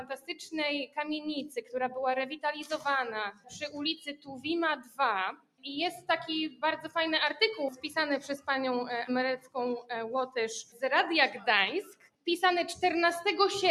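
A noise suppressor applied to music or sounds runs through the whole clip: a speech-tuned processor is treating steady, sustained material as noise, so the level keeps swinging by around 10 dB as it clamps down and lets go. Sudden onsets get through at near full strength, while held portions and decaying tails are pulled down, giving the sound a pumping, unsteady, thinned-out quality. Sound cut by the noise suppressor shows up in five stretches, where the suppressor pushes parts of the signal well below their surroundings: 0.0 to 1.74 s (deepest drop about 15 dB), 2.31 to 2.78 s (about 9 dB), 3.32 to 6.91 s (about 20 dB), 7.7 to 8.48 s (about 15 dB) and 9.37 to 12.27 s (about 20 dB). Within each stretch only fragments are cut, from a few hundred milliseconds up to roughly two seconds in the longest one. Sustains sink and tails end early.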